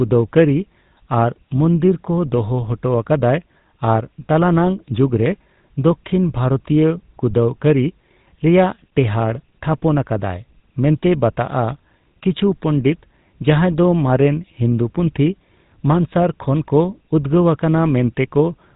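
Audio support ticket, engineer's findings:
GSM full-rate codec damage throughout: plainly audible buzzy, gravelly roughness on speech, no content above 3.8 kHz. Regular-pulse excitation, consistent with 13 kbps GSM full rate.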